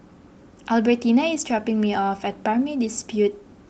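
No faults are present in this speech clip: it carries only the expected character of a WebRTC call path, with its coding and a top end that stops at about 8 kHz, consistent with Opus at a moderate bitrate.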